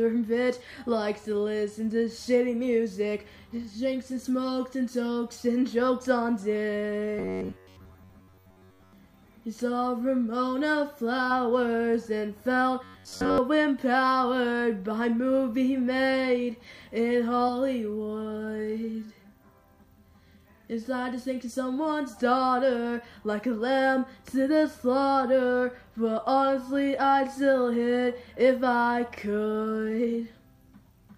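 From 7.19 to 8.93 s and again from 12.84 to 13.38 s, the sound turns into a rigid metallic buzz at 93.8 Hz. This is robotic sound, likely from repeated short buffers, with a roughly 10.7 ms slice replayed through most of each stretch while the real audio is skipped.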